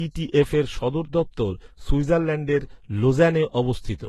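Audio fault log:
Throughout: transcoding between lossy codecs. Nothing is present above 12.3 kHz, and the speech carries two layers of coding damage: a smeared, synthetic upper band with a watery swirl, overlaid with grainy, warbling noise. The likely cause is a chain of lossy encoders. The smeared top fits a low-rate HE-AAC stage near 16 kbit/s. The later Vorbis pass, around 41 kbit/s, spends bits reproducing those artefacts and adds its own.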